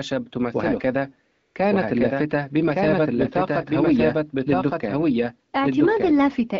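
It's a speech recording with its band-limited HD Voice character, consistent with an AMR-WB call, and it has two problems. First, there's a doubled audio track the whole way through: a full-band copy trails about a second behind at roughly the same level, with no decay or room colour. That's likely a second capture path or an edit holding two copies out of step. Second, from 1.31 to 1.55 s you get AMR comfort noise. The phone decided nobody was talking and sent no speech frames for 240 ms, so the receiver filled that gap with smooth, steady synthetic noise that switches in and out against the real background.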